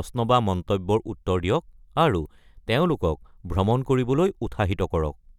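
From 0.12 to 5.38 s, clock slip clicks tick roughly every 30 ms, likely from unsynchronised clocks several hundred ppm apart, showing as evenly spaced faint vertical spectrogram lines.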